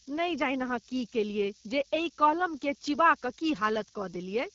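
A steady, thin hiss runs under the whole speech clip, rising sharply toward the top of the band and sitting nearly as loud as the speech itself. That is low bit depth with noise shaping: the rounding error of very coarse quantisation, consistent with about 5 bits, is pushed upward in frequency instead of spreading evenly. The speech is also plainly rough and raspy, with nothing above 7.2 kHz. That is the AMR wideband (HD Voice) codec at one of its lowest rates, likely 8.85 kbit/s, where its pulse-driven vocal tract model cannot rebuild the speech cleanly.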